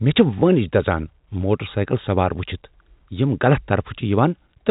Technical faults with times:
none

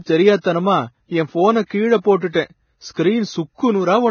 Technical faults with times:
0.00-4.11 Vorbis compression

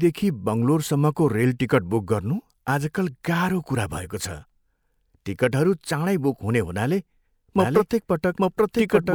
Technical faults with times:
7.56-9.14 doubled audio track

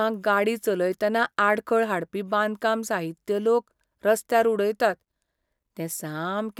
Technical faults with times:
none

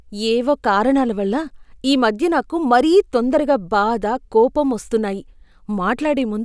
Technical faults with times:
none

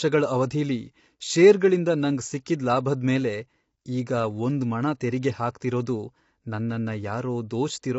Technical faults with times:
0.00-7.99 low-delay AAC compression

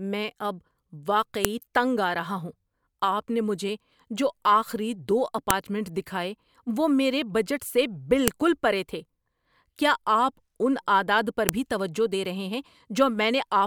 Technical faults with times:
1.45 file header played as audio
5.50 file header played as audio
8.28 file header played as audio
11.49 file header played as audio

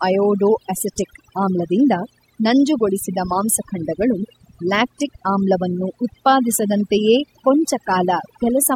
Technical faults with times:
0.00-8.76 mains hum
0.00-8.76 overdone noise removal

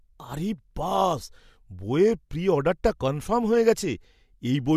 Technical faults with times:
none

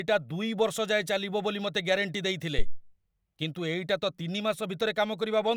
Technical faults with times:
2.58-2.81 phantom power thump

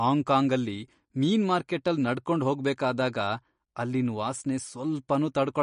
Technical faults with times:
0.00-5.63 MP3 compression

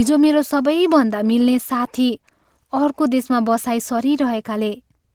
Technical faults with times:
0.00-5.15 Opus voice compression

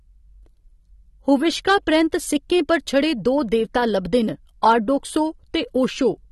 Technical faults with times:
0.00-6.32 AAC compression
2.72-2.98 hard clipping
4.69-4.72 hard clipping

